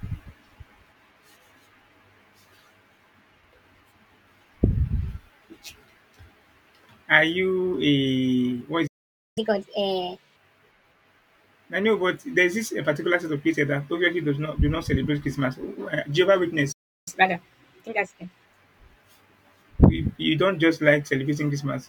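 Right after "what is", the speech cuts to silence from 8.87 to 9.38 s, about half a second. This is a playback stall, likely the player running out of data before it resumed where it left off. From 9.38 to 10.36 s the speech rushes at 1.5 times normal speed and jumps roughly seven semitones higher, a catch-up at higher speed as the player resamples its backlog to regain lost time. A second stall silences the audio from 16.72 to 17.08 s, about 0.34 s, with the same likely cause. A milder catch-up follows from 17.08 to 18.46 s at 1.25 times speed, raising pitch by roughly four semitones before it settles back to normal.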